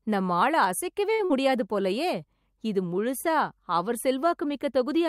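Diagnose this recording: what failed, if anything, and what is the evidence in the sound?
The network path failed twice in quick succession, right after "நம்ம ஆள அசைக்கவே". The first is a short stall from a late packet, at 1.13 to 1.21 s. A packet arrived after its playout time, so the jitter buffer ran dry and the receiver held the last sound for about 54 ms, a brief held sound. When the packet arrived, playback picked up exactly where it had stopped, so nothing is missing. That sets it apart from loss: the audio runs late but stays complete.

Moments later, at 1.25 to 1.32 s, comes a burst of packet loss. The receiver again extended the last sound, for about 48 ms, fading it as the gap went on. This time, though, the stream resumed further along, skipping roughly 60 ms of audio that never played. The held-then-fading sound resembles the stall, but the jump forward and the lost material mark it as loss rather than a late arrival.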